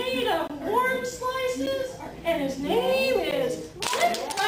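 Blocks of digital silence cut the sound at 0.48 to 0.50 s (about 21 ms, which fits a 1024-sample buffer), at 1.66 s (about 8 ms) and at 3.31 s (about 11 ms, which fits a 512-sample buffer). Each time, the audio dropped straight to silence and back with no fade, so the two shorter gaps are heard as ticks and the longest as a short hole.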